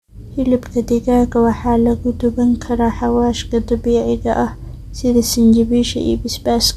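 Nothing stood out as a technical fault on listening to the speech.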